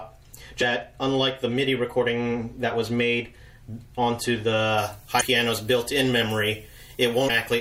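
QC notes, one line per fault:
Throughout: MP3 compression, likely the cause of the watery, swirly treble and smeared attacks, which fits a low 64 kbps encode. It differs from pre-emphasis because the top end is thinned and unstable rather than boosted.
0.59–0.63 s, 5.17–5.22 s, 7.26–7.30 s: damaged data in a compressed stream. Each brief chirp or blip, about 40 ms long, comes from the decoder losing frame sync on corrupt bytes and skipping ahead. Unlike the steady codec swirl, these are isolated events.
4.78 s to the end: pre-emphasis left on. The treble boost was never undone, leaving highs about 13 dB hot at 10 kHz relative to 1 kHz, fitting a 75 µs FM curve. The sound turns thin and sibilant, which differs from the codec's dulled top.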